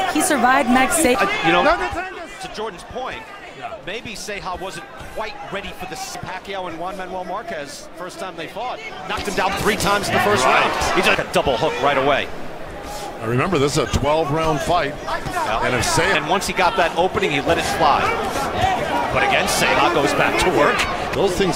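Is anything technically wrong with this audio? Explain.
Yes. From 8.81 to 9.6 s there is zipper noise. A level change of about 10 dB is applied in discrete jumps, around a hundred a second, rather than as a smoothly interpolated ramp. Each abrupt gain jump puts a small discontinuity into the waveform, and the discontinuities arrive fast enough to fuse into a buzzy ticking or zipping texture riding on the sound until the level settles.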